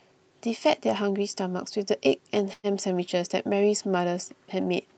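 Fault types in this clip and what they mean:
Burst of packet loss: at 2.53 to 2.66 s the receiver stretches the last sound for about 100 ms, fading it, before a brief silence. Unlike a plain dropout, the gap is filled rather than silent, and about 60 ms of speech never returns.
Jitter buffer speed-up: right after, from 2.67 to 3.01 s, the receiver trims short pitch-period slices to drain extra delay, so speech runs about 9% fast and sounds hurried. Unlike a resampling speed change, the pitch stays the same, with roughly 40 ms removed.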